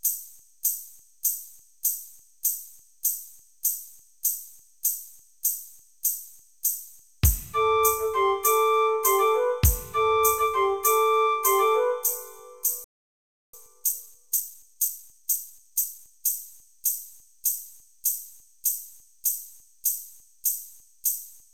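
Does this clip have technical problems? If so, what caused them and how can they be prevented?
Yes. There's a playback stall from 12.84 to 13.54 s: the audio cuts out for about 0.69 s, likely because the player's buffer ran dry or its thread got blocked. A bigger jitter buffer or a higher-priority audio thread would prevent it.

Then from 13.54 to 16.28 s there's time-compressed catch-up, where the player trims and cross-fades small chunks to clear its backlog. That runs the sound about 1.25 times fast at normal pitch. Avoiding the stall in the first place, or letting the player catch up more gently, would prevent it.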